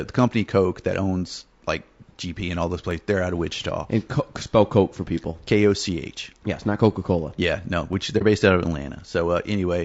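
Low-delay AAC compression runs through the whole speech clip: the voice sounds rough and grainy, with noise filling the gaps between harmonics and a thin, synthetic-sounding top band. This is likely AAC-ELD, whose short frames resolve pitch poorly, squeezed to a rate that fits about 32 kbps.

Dropped samples produce a single sharp click at 2.91 s, just after "and all those", and another at 7.93 s. At each point the waveform likely jumps forward over a fraction of a millisecond of missing samples. That gap is too brief to remove any sound, leaving only a hairline tick.

AAC frame loss with muting causes a brief dip from 8.18 to 8.23 s, right before "based out of". About 30 ms of spectrum, consistent with one lost frame, was zeroed by the decoder. The overlapping windows fade the sound down and back up.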